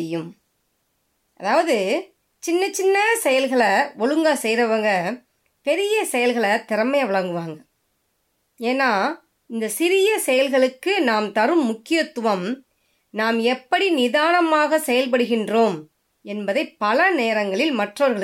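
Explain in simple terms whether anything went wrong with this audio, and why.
Nothing went wrong here: the speech recording comes through with no technical faults to be heard anywhere in it.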